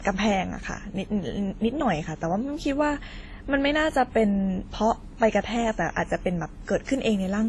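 From start to end, the speech has nothing above 11.9 kHz. Two different coding artefacts sit on top of each other and are heard together. This points to transcoding between lossy codecs, likely WMA, then Opus, then WMA again, fitting rates near 32 and 64 kbit/s.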